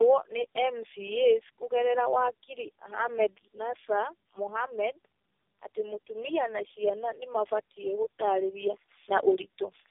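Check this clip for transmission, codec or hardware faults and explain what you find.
One fault runs through the whole recording. Tandem speech coding is present from start to finish. The speech sounds like it went through about four separate speech coders in series, likely an AMR-NB, CVSD, G.729A and AMR-NB chain. Each coder re-encodes the previous one's errors, so the speech is rough, muffled and warbly, with nothing above 3.5 kHz.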